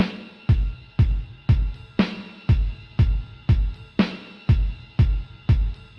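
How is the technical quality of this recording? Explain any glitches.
No glitches: the sounds arrive intact over the call link, whose codec rolls off the top end at around 12 kHz, with no dropouts, clicks or timing disturbances.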